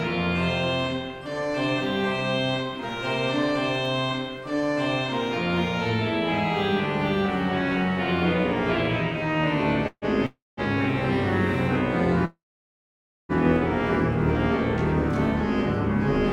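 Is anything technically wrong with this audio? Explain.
Yes. Call audio freezes occur at 9.87 to 10.05 s, 10.26 to 10.60 s and 12.25 to 13.32 s. The last sound is drawn out as a fading buzz, then silence. Audio resumes where it stopped, with nothing lost. Delayed packets likely emptied the jitter buffer.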